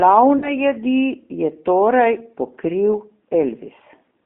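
From start to end the speech carries G.729 codec damage: a band of roughly 200 Hz to 3.5 kHz, with a rough, slightly synthetic texture from rebuilding each 10 ms frame out of a filter, a pitch predictor and a few pulses. The coloration fits an 8 kbit/s G.729A coder.

From 0.38 to 0.56 s there is VoIP packet loss concealed by the speech codec. About 40 ms of audio is missing, which fits two lost packets. The decoder fills the gap by extending its last pitch and filter into a fading sound, and the speech stays weak and distorted until about 0.56 s.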